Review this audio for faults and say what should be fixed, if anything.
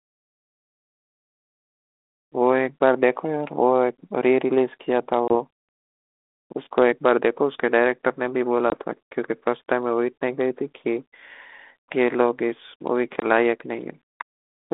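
Packet loss on an ADPCM call at 5.28 s, 8.7 s and 13.2 s: about 20 ms, roughly one packet, drops to hard-edged silence. The decoder's predictor and step size then lose sync with the sender's, so the speech returns briefly slightly distorted before settling. Packet-loss concealment, with the decoder's ADPCM state resynchronised after each gap, would prevent these holes and the recovery glitches.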